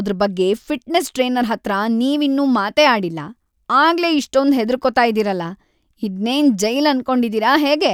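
No technical faults are audible.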